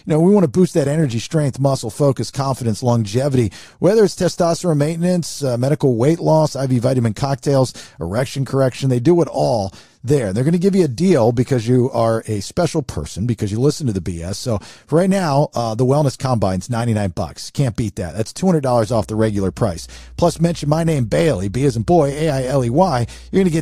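From 18.90 s, right after "two hundred dollars", a steady low drone at 60 Hz enters beneath the speech and continues to the end of the clip at 23.61 s. It sits roughly 20 dB below the speech level. This is mains hum: a ground loop or a nearby transformer has let the 60 Hz power line leak into the signal path.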